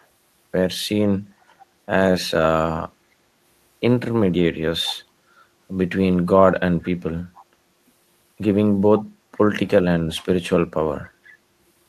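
Faint echo leak at 0.00–0.06, 1.59–1.66, 7.35–7.44 and 11.26–11.32 s: brief, very quiet scraps of speech repeating about 0.47 s late. A loudspeaker echo canceller likely let them through.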